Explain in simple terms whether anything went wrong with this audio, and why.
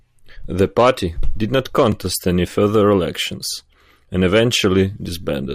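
A block of digital silence occurs at 1.92 s, right after "did not" and before "any further elections and". For about 2.7 ms the sound drops out and jumps back with no fade, giving a tiny tick. A short block of output, which fits a 128-sample buffer, likely wasn't filled in time.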